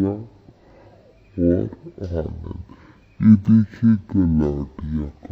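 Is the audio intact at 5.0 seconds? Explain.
No. At 5.0 seconds, as throughout the clip, the audio shows stereo read as mono: interleaved left and right samples are played back in sequence as one channel. The sound runs at 0.5x speed, a full octave (12 semitones) low, with a faint mirrored copy in the upper spectrum.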